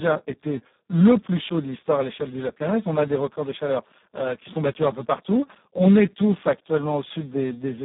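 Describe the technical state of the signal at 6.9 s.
At 6.9 s you're hearing the Speex codec damage that runs through the whole clip. The speech is squeezed into a 150 Hz to 3.7 kHz phone band with nothing above 3.8 kHz. The excitation is starved of bits, which fits a setting around 4 kbps, so it comes out hoarse, noisy and fairly robotic.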